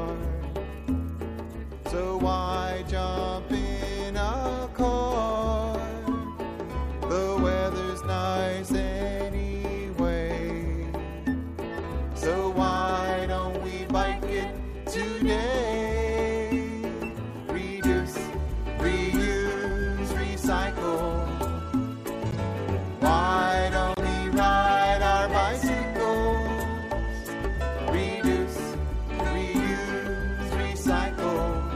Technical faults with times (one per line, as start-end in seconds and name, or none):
15.02 corrupt frame decoded
16.75 corrupt frame decoded
22.31-22.34 corrupt frame decoded
23.90-23.99 corrupt frame decoded